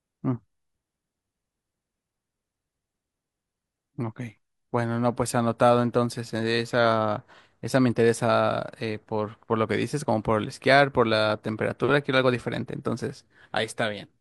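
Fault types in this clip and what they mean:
No faults can be heard in this speech recording.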